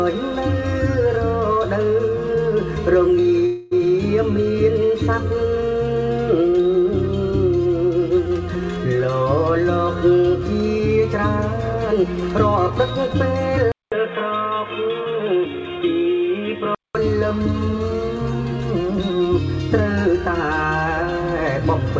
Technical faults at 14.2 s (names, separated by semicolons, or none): input switched to a poorer device